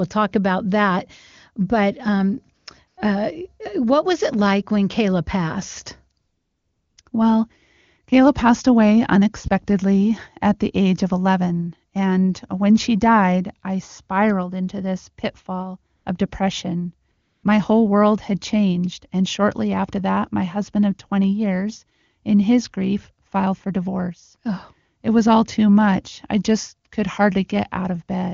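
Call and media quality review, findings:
AMR comfort noise: sender's voice activity detection flagged silence and halted speech frames; receiver synthesised noise from coarse level/spectrum parameters. Real background replaced by steady smooth hiss switching in and out. Gaps at 2.57–2.65 s, 2.87–2.97 s before "uh what was it", 6.19–6.97 s, 7.01–7.05 s, 7.09–7.11 s, 15.95–16.05 s between "spiraled into this pitfall" and "of depression", 17.11–17.43 s after "this pitfall of depression".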